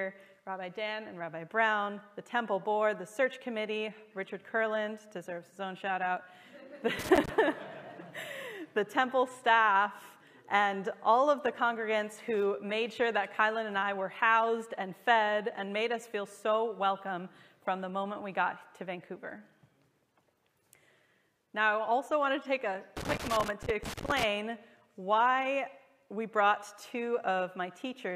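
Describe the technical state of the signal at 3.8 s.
At 3.8 s the signal is intact, with no dropout, clipping, glitch or other fault audible at that moment.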